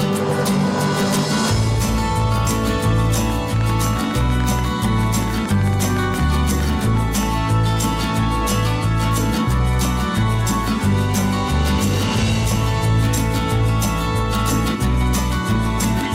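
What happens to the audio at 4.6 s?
At 4.6 s you're in the middle of a train of clicks running from about 3.30 to 7.24 s: roughly forty sharp, similar pops, near ten a second but unevenly spaced, peaking about 5 dB above the sound. Likely interference or a faulty connection or power supply.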